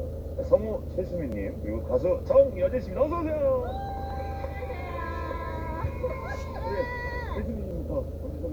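At 1.32 s and 2.23 s, the program likely failed to read its input before the hardware overwrote it, a dropped buffer (overrun). Each loses about 10 ms and splices the two sides together, so the sound jumps forward. At 3.89 s, compressed frames were skipped: roughly 70 ms is missing, consistent with two 32 ms frames, and the audio jumps ahead by that amount. Another likely dropped buffer at 4.10 s gives the same jump. A single skipped frame at 7.57 s loses about 30 ms. The largest likely overrun, at 7.71 s, removes about 40 ms, making the sound jump ahead.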